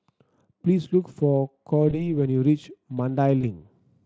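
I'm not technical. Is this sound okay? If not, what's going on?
No. VoIP packet loss concealed by the speech codec: two 20 ms chunks of speech went missing and were filled in by guesswork, causing brief buzzy or noisy, fading patches at 1.89–2.14 s and 3.41–3.46 s.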